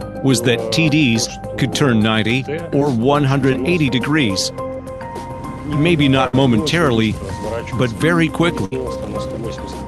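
Brief smears, each a wobble, appear at 2.79 to 2.83 s and 3.53 to 3.56 s. These are short concealed packet losses: about 20 ms of audio arrived too late, and the receiver filled the hole by extending the preceding sound before blending back into the real signal.

At 6.27 to 6.35 s and again at 8.65 to 8.73 s, the sound stretches into a held, fading tail and then jumps forward. Each is a burst of packet loss, with about 60 ms of audio missing. The receiver kept continuing and turning down the last sound, and playback resumed after the gap. The call path itself, through Opus with its high end cut off above 12 kHz, is heard throughout.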